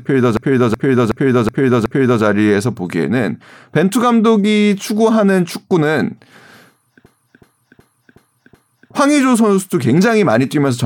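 From 0.37 to 2.23 s, and again from 7.06 to 8.92 s, a system hang loop repeats one 0.37 s slice of speech five times, a stutter at about 2.7 Hz. The computer or driver froze while the hardware kept replaying its ring buffer, which fits a 16384-sample buffer. Little audio seems lost afterwards. On a waveform and spectrogram, each stretch shows five identical blocks side by side, with hard seams at each repeat.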